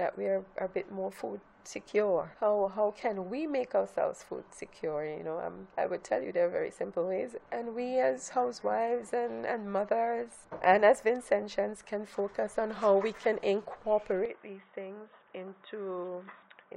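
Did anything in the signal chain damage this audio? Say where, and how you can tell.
Yes. At 14.26 s the sound turns dull and boxy and stays that way to the end, most likely because the input switched to a poorer device at the driver level. Nothing passes above 3.8 kHz, the level falls by roughly 5 dB, and a new noise floor appears about 45 dB below the signal, with no silence at the switch. On a spectrogram the upper band is abruptly cut off at that moment, and the waveform envelope visibly steps down.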